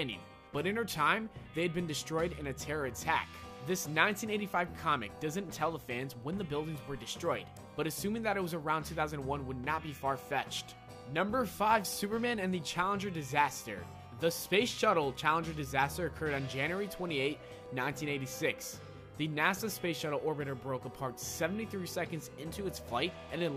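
At 7.57 s there is a single electrical switching spike. It is one sharp snap, over in a few milliseconds. It sits on top of the sound rather than replacing it. Its level is modest, peaking at around -30 dBFS. The likely cause is a brief arc from a nearby switch, motor or static discharge. The audio line picked up that burst of interference.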